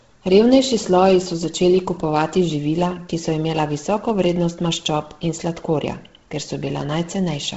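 Likely Bluetooth LC3 compression at a low bitrate throughout: heavy codec damage in 10 ms frames, nothing above 7.7 kHz, giving the speech a breathy, grainy, noise-filled top.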